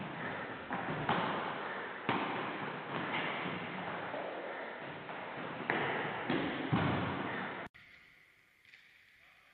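No technical faults can be heard anywhere in the signal.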